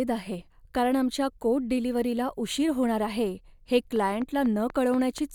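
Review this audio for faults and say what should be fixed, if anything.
A train of clicks runs from 3.96 s to 5.19 s: about seven near-identical pulses at a steady 4.1 per second, peaking about 5 dB above the speech, so they tick clearly over the sound and through the gaps. The even spacing and repeated shape set it apart from random crackle or a single edit pop, and point to likely electrical interference or an interface losing sync. To prevent it, separate the recording chain from nearby equipment and secure a stable interface connection.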